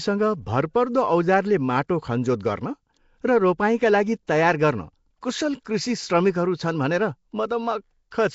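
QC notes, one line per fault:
throughout  Nellymoser compression: the speech carries a rough, hissy halo and a smeared, underwater quality, with nothing above 7.7 kHz. This is likely Nellymoser Asao, with a bitrate around 32 kbps, where coarse block coding starves weak bands and fills them with noise.
4.27 s, 5.64 s  pre-echo: a brief hiss arrives just ahead of a sharp onset, about 11 ms early right after "र रोपाइँका लागि" and about 12 ms early at 5.64 s, softening each attack. The coarse quantisation noise from each loud block spills into the quiet moment before it.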